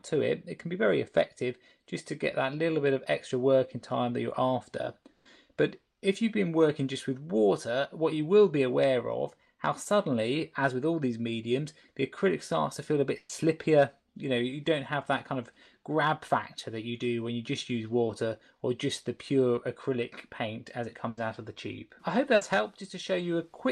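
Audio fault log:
5.11–5.27 s, 13.17–13.31 s, 21.09–21.19 s and 22.35–22.43 s, burst of packet loss: runs of audio lasting 140, 120, 80 and 60 ms never arrived in time. The receiver extended the preceding sound across each hole, fading it as a held buzz or hiss. Playback then jumps ahead, and that stretch of the original is gone.
18.07–18.11 s and 19.55–19.59 s, short concealed packet loss: about 20 ms went missing each time. The decoder filled the gap by continuing the last sound and blending back into the real audio, which leaves a brief smear or wobble.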